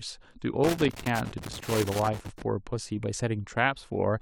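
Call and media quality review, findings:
Loose connector crackle, 0.64 to 2.42 s: irregular scratchy bursts over speech from an intermittent contact chopping signal. Waveform shows dropouts and spikes; spectrogram shows broadband vertical streaks.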